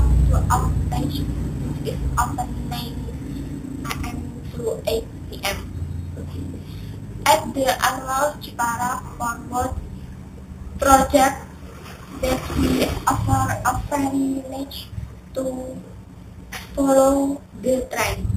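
Imaging from sample-and-hold upsampling runs from start to end. It points to an 8 kHz source raised to 44.1 kHz by repeating samples, unsmoothed. Mirrored spectrum copies fill 4 to 8 kHz, about 16 dB down. They add a bright metallic fizz that tracks the sound's level.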